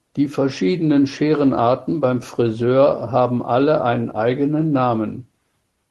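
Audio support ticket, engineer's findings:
No faults found.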